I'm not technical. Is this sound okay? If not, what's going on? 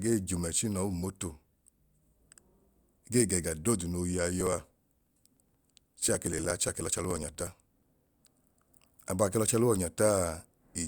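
No. From 4.41 to 8.55 s, just before "abaa ke", periodic USB or driver dropouts skip a few milliseconds every 0.06 s, giving evenly spaced ticks, unlike random clicks.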